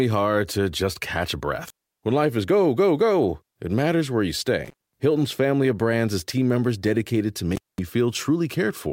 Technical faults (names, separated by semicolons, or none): intermittent contact